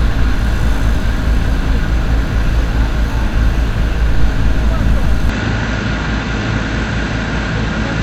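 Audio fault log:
5.29–8.02 s, input switched to a poorer device: the sound abruptly turns duller, with nothing above 8 kHz, drops a few dB in level and gains a faint new noise floor, with no gap at the change, likely because recording moved to a narrower-band input.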